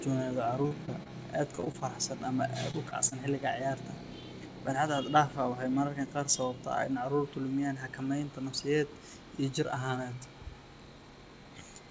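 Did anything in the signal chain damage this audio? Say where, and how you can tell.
Yes. The network stage dropped packets in two bursts of repeated packet loss (robotic sound), 0.62–1.09 s and 1.55–1.83 s. Four and then five short gaps, none over about 26 ms, were each patched by extending the previous sound. That leaves the speech choppy, with fragments missing.

Single short concealed packet losses follow at 2.71–2.75 s, 2.89–2.93 s and 3.09–3.13 s, each about 20 ms of audio that arrived too late for the decoder. The receiver bridged each hole with a continuation of the preceding sound before blending back, heard as a brief smear or wobble. The call codec, consistent with G.722 at 64 kbps, leaves nothing above 8 kHz.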